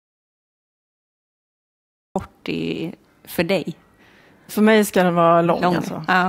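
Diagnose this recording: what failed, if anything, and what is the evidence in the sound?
The clip opens in an audio dropout to silence. From 0 to 2.16 s there is nothing at all: no hiss, no room tone. The silence is already under way when the clip begins. Speech then starts abruptly on "i för dig", mid-flow rather than from a natural pause. The capture stage likely lost its input, through a disconnected device, a failed link or a mute, while the recorder kept writing empty samples. Whatever was spoken in those two seconds is lost.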